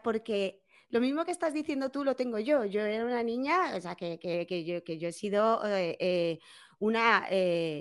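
No faults can be heard anywhere in the clip. The speech runs without any dropout, glitch, distortion or other technical fault at any point.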